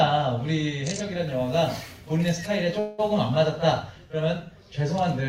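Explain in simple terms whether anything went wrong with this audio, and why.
At about 2.79 s the sound briefly stalls into a fading buzz or hiss for roughly 0.2 s, then carries on from exactly where it stopped. This is a call audio freeze, likely from data held up in transit, leaving the receiver to fill the wait. Nothing is lost, but everything afterward runs about 0.19 s late.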